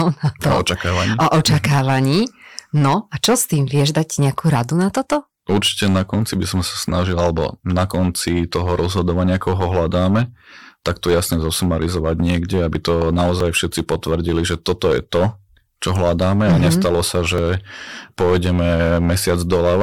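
Speech with a harsh, fuzzy edge on every loud syllable throughout: hard clipping, the level driven about 10 dB past full scale so roughly one sample in twenty is cut flat. Brief clicks or tiny skips land at 1.44, 9.41, 13.40 and 17.38 s, an overlap between stream segments where the player trims a few milliseconds at 4 s segment boundaries.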